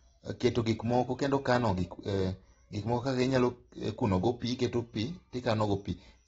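Speech throughout carries plainly audible AAC compression damage, likely from AAC-LC at a low rate, which fits about 24 kbps. Nothing sounds above 8.7 kHz. Unlike a plain low-pass filter, sibilants and sustained sounds also warble and fizz where the spectrum has been thinned.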